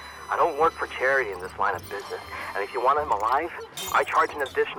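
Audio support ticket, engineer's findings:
No faults found; no defects audible.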